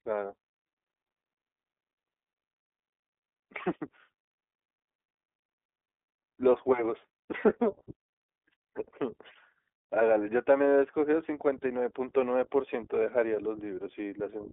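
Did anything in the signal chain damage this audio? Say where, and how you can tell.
Yes: iLBC codec damage runs throughout, at the codec stage. Nothing passes above 3.8 kHz, the band spans 250 Hz to 3.6 kHz, and the speech sounds plainly rough and synthetic because each 20 ms frame's excitation is coded independently, fitting the 15.2 kbps mode.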